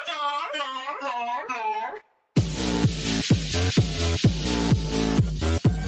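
The audio has come through a call chain, with everything above 8 kHz gone, which fits a wideband Opus setting at around 20 kbps. The fault is sound cut by the noise suppressor between 2.0 and 2.23 s. For about a fifth of a second the suppressor mistakes the audio for background noise and pulls it down hard, about 12 dB at its deepest. The sustained, fading parts sink while any sharp onsets still poke through.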